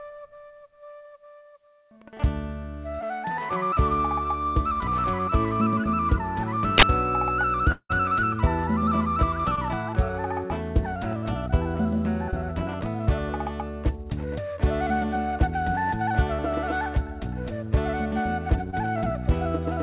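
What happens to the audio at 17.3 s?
Nothing goes wrong at 17.3 s: the audio runs through intact, with only the narrow, telephone-like band of the G.711 mu-law call path, which leaves nothing above 4 kHz.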